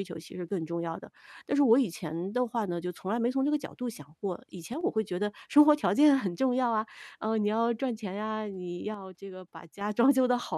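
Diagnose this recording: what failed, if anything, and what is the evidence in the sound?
Speech drops abruptly by about 6 dB at 1.05–1.17, 4.74–4.81 and 8.94–9.81 s, likely one channel dropping out in analogue wiring before mono summing.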